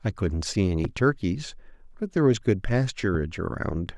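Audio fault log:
0.85–0.87 s and 3.15–3.17 s, loud pop: a sudden voltage pulse, likely from a switch, plug contact or static discharge, enters the signal path each time, putting a single sharp pop roughly 10 dB above the speech, which continues uninterrupted beneath it.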